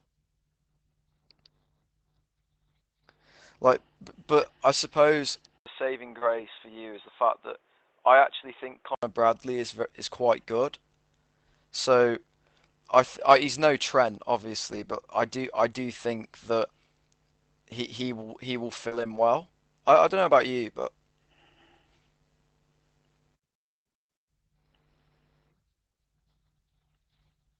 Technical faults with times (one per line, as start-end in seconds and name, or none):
5.19 lost packet rebuilt from error correction
5.58-9.03 input switched to a poorer device
6.19-6.24 short concealed packet loss
6.21-6.23 lost packet rebuilt from error correction
9.56-9.58 lost packet rebuilt from error correction
13.54-13.60 lost packet rebuilt from error correction
14.68-14.82 lost packet rebuilt from error correction
18.88-18.93 short concealed packet loss
18.91-19.17 lost packet rebuilt from error correction
20.23 lost packet rebuilt from error correction